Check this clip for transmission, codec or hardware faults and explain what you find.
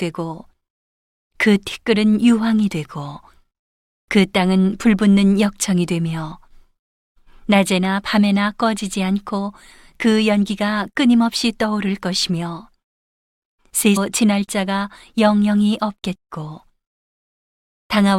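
One fault turns up in this speech. At 13.96 s the sound jumps abruptly forward with a brief blip, likely a stream segment skipped: one chunk of the segmented stream failed to load and the player carried straight on with the next. A waveform shows a hard discontinuity there, and a spectrogram shows a thin vertical click line with mismatched content on either side.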